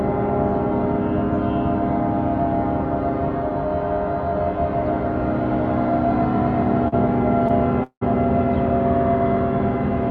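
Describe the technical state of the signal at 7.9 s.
At 7.9 s the signal is inside a call audio freeze running from 7.83 to 8.03 s, likely from delayed packets draining the jitter buffer. The last sound is stretched into a fading buzz, then about 80 ms of silence. The spectrogram shows smeared horizontal bands decaying to a blank gap. The waveform shows a shrinking envelope flattening to silence before the sound resumes about 179 ms late, with nothing lost.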